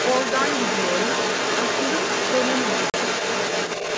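From the start of the clip to its end, the other side's voice leaking through runs under the main talker at roughly the same loudness. The likely cause is a residual echo the canceller failed to remove from the microphone. Unlike crosstalk, it carries the far end's own conversation back.

From 2.90 to 2.94 s there is packet loss on an ADPCM call: a hard-edged 40 ms gap, about a couple of packets. When sound resumes, the decoder's predictor is briefly out of step, giving slightly distorted speech rather than a smooth concealed fill.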